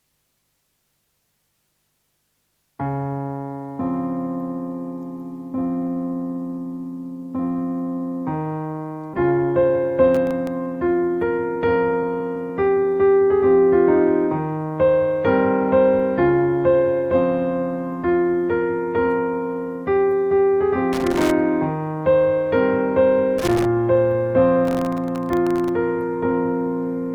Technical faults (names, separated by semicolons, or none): skip ahead; jitter buffer speed-up; processor overload crackle; loose connector crackle